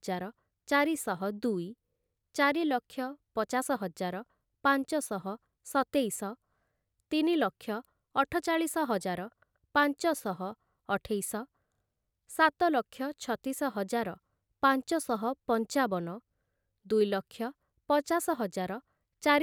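No technical faults can be heard anywhere in this speech recording.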